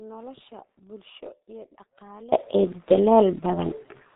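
From the start of the clip until 2.32 s there is an audio dropout to a faint residue. The speech is already missing when the clip opens, leaving only a faint trace roughly 25 dB down. This is likely a lost signal feed whose downstream path stayed live. Unlike a fade or natural pause, the return at 2.32 s is abrupt. Throughout, the G.723.1 codec leaves the speech muffled and hoarse, with nothing above 3.8 kHz and smeared consonants. This fits a rate around 6.3 kbit/s with 30 ms frames. The heavy damage is steady rather than intermittent, which sets it apart from packet loss.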